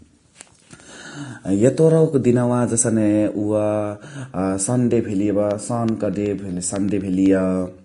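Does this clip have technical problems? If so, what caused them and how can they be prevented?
Yes. Throughout the speech the treble is grainy and hissy, with nothing above about 10.6 kHz; this is likely Vorbis compression, which fits a low bitrate near 34 kbps. Encoding at a higher quality setting would prevent it.

From 5.51 to 7.26 s, regular ticks sound every 0.125 s, about fifteen in all. These are periodic USB or driver dropouts: a recurring background task stalls the audio path, and each stall replaces a fraction of a millisecond with silence. Larger driver buffers, a dedicated USB port and disabling the interfering background process would prevent them.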